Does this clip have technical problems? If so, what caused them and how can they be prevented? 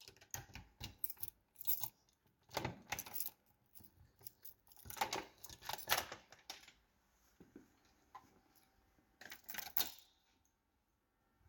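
No, there's nothing wrong to hear in this one, so there's nothing to trace back or guard against.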